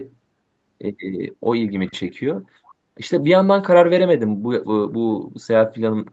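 Echo leak at 1.87 to 1.92 s and 2.65 to 2.71 s in this speech: faint scraps of the voice return about 0.4 s late, likely from a far-end loudspeaker the echo canceller didn't fully cancel.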